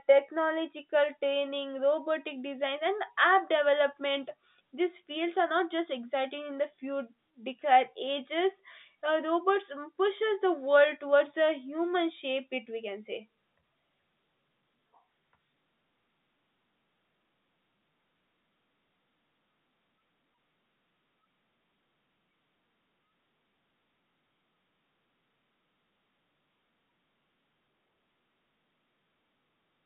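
No technical faults can be heard in the speech, which comes over an ordinary G.711 telephone path whose 150 Hz to 3.7 kHz band and A-law coding, consistent with a 64 kbps line, are working as intended.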